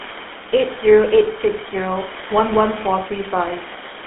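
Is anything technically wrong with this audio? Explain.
Yes. Throughout the speech there is a buzzy, gravelly roughness with a muffled, narrow tone confined to roughly 300 Hz to 3.5 kHz. This is GSM full-rate codec damage: the vocal tract is modelled and driven by sparse regular pulses, consistent with a 13 kbit/s stream. The room noise sits about 15 dB below the speech.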